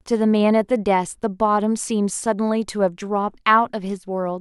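No technical faults can be heard anywhere in this speech recording. Nothing in it breaks, drops out or distorts at any point in its running time.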